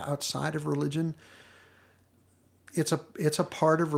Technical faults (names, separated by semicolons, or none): none